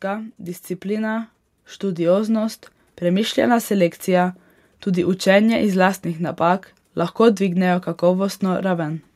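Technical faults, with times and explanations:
0.05–3.41 s, automatic gain rising: the automatic gain control judged the incoming level too low and stepped its gain up slowly, by about 6 dB over roughly three and a third seconds. Because the boost is applied to the whole signal rather than to the speech alone, the voice and the room noise beneath it swell together, so the opening sounds as though it is gradually drifting closer and louder instead of holding a steady level.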